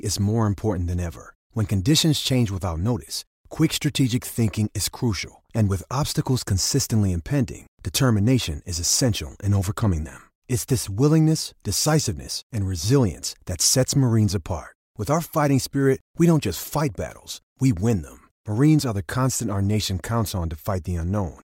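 No technical faults are audible anywhere in the speech recording.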